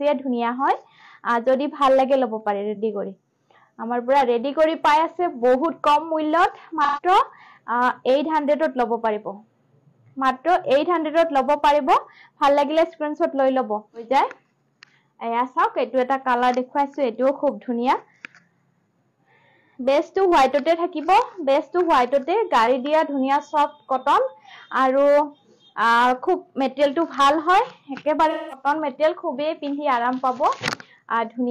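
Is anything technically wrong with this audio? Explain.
Yes. At 6.84–7.02 s and 28.30–28.66 s the sound turns briefly smeared and noisy, the second patch longer. This is AAC frame loss with concealment: lost frames, roughly 130 ms and 210 ms of them, were rebuilt by the decoder from the last good spectrum.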